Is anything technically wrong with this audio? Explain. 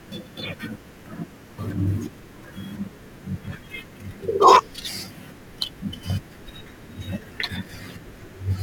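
Yes. At 3.48 s, an overlap between stream segments made the player trim audio it wrongly treated as duplicated, so a few milliseconds vanish and the speech jumps with a tiny skip.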